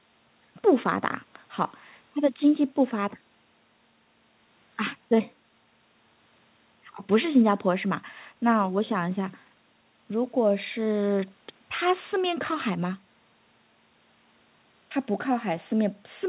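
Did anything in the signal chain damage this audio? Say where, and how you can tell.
No, the speech shows no damage from any stage, only the expected call-path sound: the band stops at 4 kHz, which fits a narrowband G.711 mu-law link at 64 kbps.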